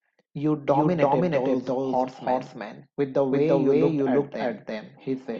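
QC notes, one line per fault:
Throughout: doubled audio track, the speech repeated roughly 300 ms later at about equal level with no decay, likely from a slower second capture path.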